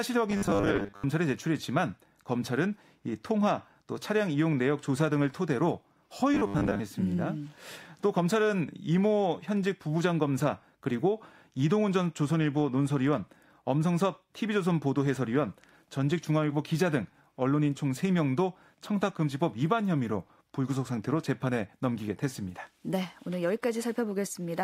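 Speech that turns into a rigid, metallic 100 Hz buzz from 0.31 to 1.04 s and again from 6.34 to 6.80 s: robotic sound, likely from repeated 10 ms buffers.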